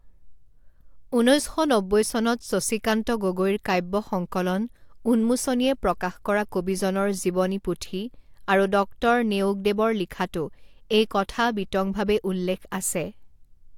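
Nothing jumps out here at all; the speech just rolls along with no technical faults to point to.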